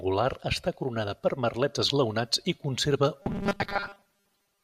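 Speech, and from 3.22 s right to the end it goes robotic: a rigid metallic buzz at 200 Hz that only loosely tracks the talking. That's robotic sound from repeated short buffers, likely starved input making the software loop a 5 ms chunk for most of that stretch while real audio gets skipped.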